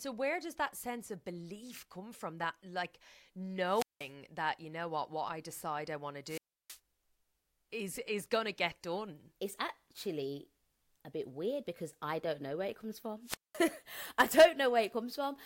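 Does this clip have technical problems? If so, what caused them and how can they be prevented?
Yes. The speech drops out three times with wireless microphone squelch dropout: 3.66 to 4.12 s, ending just before "that you know what"; 6.25 to 6.79 s, right after "decide i want to"; and 13.23 to 13.60 s, after "know where it comes". Each time the FM radio link fades, hiss creeps up, then the receiver's squelch mutes the output for about 180, 320 and 210 ms before the audio comes back. Better antenna placement, line of sight and fresh batteries should prevent it.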